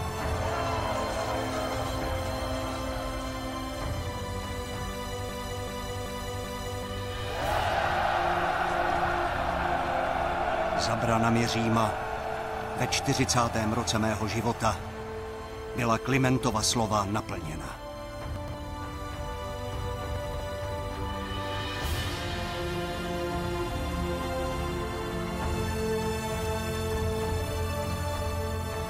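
From 5.29 to 6.83 s there's a broken-record loop: a 384 ms fragment plays four times back to back, likely a stalled player or stream resending its last buffer. Chunks out of order turn up at 18.36–18.54 s and 20.16–20.4 s, where a 60 ms piece lands two and then three chunks late, giving a jumbled stutter.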